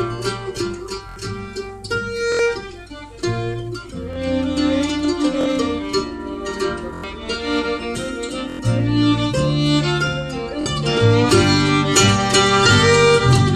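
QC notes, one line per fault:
1.09–1.16, 2.32–2.39, 4.13–4.16, 5.41–5.46, 6.94–7.04, 8.50–8.59, 10.61–10.66 s, repeated buffer: new audio arrived late, so the same 23 ms block, which fits a 1024-sample buffer, replayed one to four extra times. Each replay is a short stutter, and about 20 to 100 ms of sound is lost. In the waveform, identical 23 ms segments tile side by side with abrupt joins. On the spectrogram, the frames repeat with thin vertical lines at each seam.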